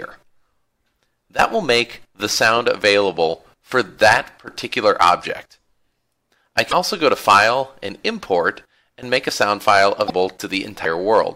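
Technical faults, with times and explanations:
6.68–6.73 s and 10.05–10.10 s, damaged data in a compressed stream: in each of these two spots, lasting roughly 60 ms, a short stretch of the compressed data is corrupt. The decoder misreads those frames, loses sync and skips ahead to the next valid frame header, producing a brief chirp or blip. On a spectrogram each appears as a narrow vertical smear of broadband or garbled energy with an abrupt edge. On the waveform the envelope shows a sudden discontinuity.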